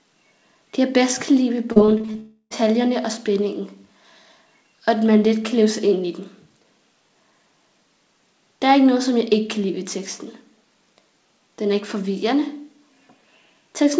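From 1.72 to 2.16 s there is repeated packet loss with a robotic sound. Six short holes, the longest 37 ms, are each bridged by stretching the preceding audio, so about 31% of that span is synthetic. The result is a choppy, robotic stutter.

From 2.20 to 2.63 s the signal breaks again in a way that points to a likely long network dropout. For roughly 0.3 s the last sound is held and smeared into a fading buzz, then about 30 ms of silence follows before normal audio resumes. The content from that stretch is simply gone. Over both events, the band-limited character with nothing above 8 kHz fits a G.722 call path at 64 kbps.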